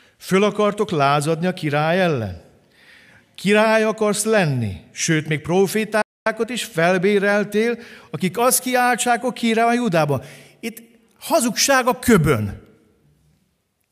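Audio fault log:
6.02–6.26 s, playback stall: the speech cuts to silence mid-flow for about 0.24 s, then resumes with "is felbéreltél akik azt". The likely cause is the player's output running dry for a moment, either from a late buffer refill or a briefly blocked audio thread, which held the output silent until data flowed again.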